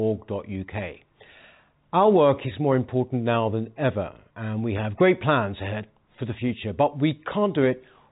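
Nothing stood out on listening to this speech, which carries the narrow band of ordinary telephone coding with nothing above about 3.8 kHz.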